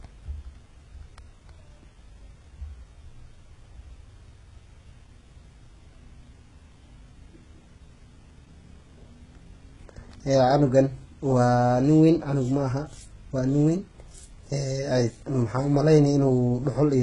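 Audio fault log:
Throughout: heavy HE-AAC compression, likely from a very low-bitrate stream, with the treble sounding synthetic rather than real. The codec keeps only the lower band properly and fakes the top by copying lower bands upward under a rough envelope, so the brightness is there but the harmonics don't line up. That's why the s sounds come out gritty and lispy. Nothing at all above 11 kHz, and the overall damage points to roughly 12 kbps.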